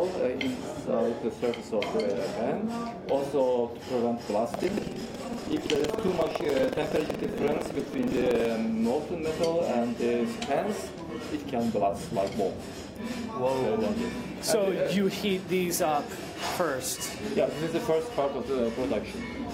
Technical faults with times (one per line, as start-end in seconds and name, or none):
4.50-8.48 buffer tearing